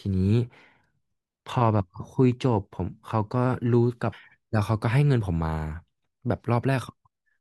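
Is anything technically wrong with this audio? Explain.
Yes. At 4.12 s the speech jumps abruptly forward with a brief blip, and a stretch of the programme is gone. This is likely a stream segment skipped: one segment of the segmented stream failed to load, and playback resumed from the following segment.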